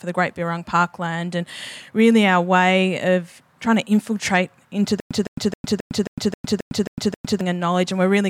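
Stutter with silent gaps, 5.00 to 7.41 s: a 162 ms fragment of speech replays nine times, separated by 106 ms of digital silence, likely a stalled stream retrying.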